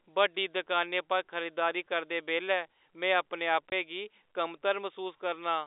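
At 3.70 s the speech drops out abruptly for 20 ms, to 3.72 s, with hard edges where the waveform is cut off and then resumes without any fade. This is packet loss filled with silence. Audio went missing in transit and the receiver played zeros in its place. A gap of this length fits two lost 10 ms packets. The telephone band from 300 Hz to 3.7 kHz of the G.711 coding is heard throughout.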